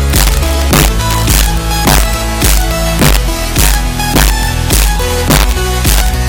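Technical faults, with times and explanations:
throughout, integer overflow: violent sharp cracks on the loudest peaks; pushed about 2 dB past full scale, a small fraction of samples wrap to the opposite sign instead of limiting.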